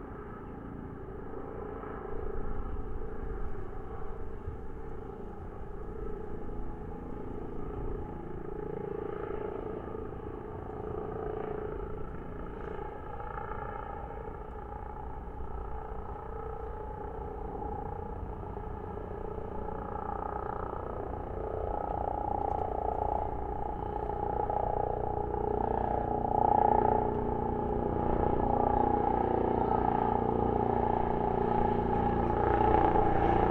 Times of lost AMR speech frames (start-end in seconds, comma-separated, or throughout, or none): none